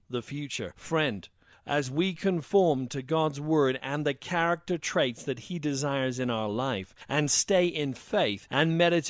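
Nothing is technically wrong with this audio.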